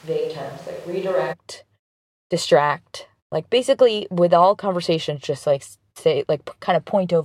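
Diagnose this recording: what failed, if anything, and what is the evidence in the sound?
The opening of the recording most likely comes from a switch to a distant microphone at the capture stage, with the close microphone's signal missing until about 1.31 s. The speech is already roomy and hollow when the clip begins, with thin bass, a level roughly 5 dB down, and background noise sitting only about 25 dB below the speech. At 1.31 s the sound changes abruptly to the close, fuller pickup.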